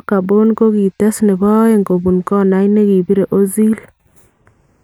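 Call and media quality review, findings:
Slow flanging sweep on the speech throughout when summed to mono. Channels drifting apart: two capture devices on separate clocks, roughly 40 ppm off, inter-channel delay creeping to a fraction of a millisecond, comb notches sliding.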